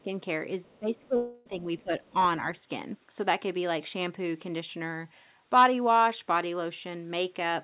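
At 0.03 s the speech dips briefly by around 10 dB. From 0.65 to 2.14 s it sinks again, by up to around 20 dB and for about a second in total, and a shallower dip of around 5 dB follows at 2.41 to 2.59 s. This is speech suppressed in double talk, likely because the echo canceller heard both sides at once and turned the talker down. The voice drops in level.

At 0.66 to 0.79 s, and again at 2.04 to 2.09 s, a faint second voice about 35 dB below the speech slips through in short scraps. This is the other side's voice leaking through, likely residual loudspeaker echo the canceller missed. Unlike the suppression, this adds sound rather than taking the talker's level away.

From 1.16 to 1.47 s comes a long network dropout, likely a stretch of lost packets. About 0.3 s of audio never arrives, and the receiver fills nearly all of it by stretching the last sound into a fading buzz. The speech then resumes with that stretch gone.

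The whole clip sits in a band ending at 4 kHz, which fits G.711 A-law at 64 kbps.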